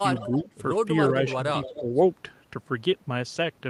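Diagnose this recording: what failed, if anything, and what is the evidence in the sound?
Call processing failed at the loudspeaker end: its echo canceller likely passed residual pickup back, an echo leak. From 0.16 to 0.44 s and 1.63 to 1.82 s, a faint copy of the speech trails 286 ms behind, about 15 dB down.

Speech suppressed in double talk, also in call processing: the canceller likely mistook overlapping talk for echo and attenuated both. Between 0.28 and 0.47 s the speech dips by about 5 dB for under a tenth of a second; between 1.76 and 1.93 s it sinks about 15 dB for roughly a sixth of a second.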